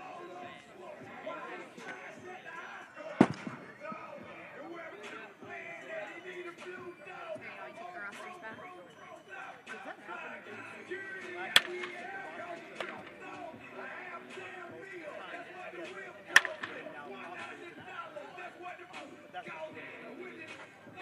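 From 2.87 to 4.93 s the sound drops about one and a half semitones (−1.47) and slows to 0.919 times its speed. This is a wrong sample rate: playback ran slower than the recording rate with no conversion, which fits 48 kHz material played at 44.1 kHz.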